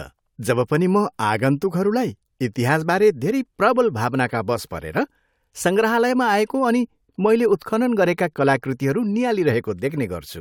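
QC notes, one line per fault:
No faults heard in this speech clip on QC review.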